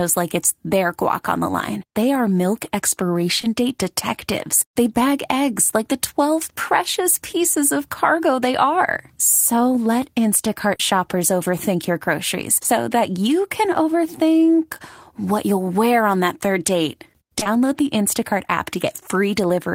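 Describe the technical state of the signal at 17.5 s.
Just after "on that third date", the signal carries short concealed packet loss in two consecutive events, 17.39 to 17.43 s and 17.43 to 17.47 s, each 20 ms of audio that arrived too late for the decoder. The receiver bridged each gap by extending the preceding sound, pitched if voiced or as shaped noise if not, then crossfaded back. The result is a brief smeared wobble ending just before 17.5 s.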